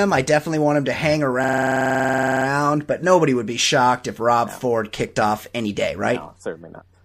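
Speech, with a system hang loop from 1.44 to 2.46 s, after "want him to hang": one 46 ms slice repeats exactly, fitting a 2048-sample buffer, giving a 21.5 Hz machine-gun stutter. Unlike a dropout, nothing goes silent, and speech resumes at "but nobody would be" with essentially nothing missing.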